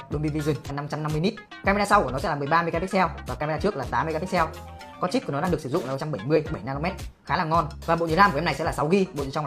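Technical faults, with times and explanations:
0.65–0.71 s and 5.95–6.01 s, damaged data in a compressed stream: corrupted frames make the decoder lose sync and search for the next header, producing brief disturbances about 55 ms long.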